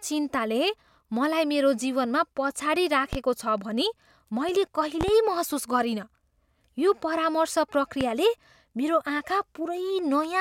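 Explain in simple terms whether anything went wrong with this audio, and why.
Loud pops occur at 3.13 to 3.17 s, at 5.01 to 5.12 s (two in quick succession, just before "महसुस गरिनँ") and at 8.01 to 8.05 s, each well above the speech. A sudden jolt of electrical voltage, likely from a plug, switch, static discharge or a driver glitch, was added to the signal, and the equipment after it turned that jolt into a sharp crack. The speech carries on underneath each one.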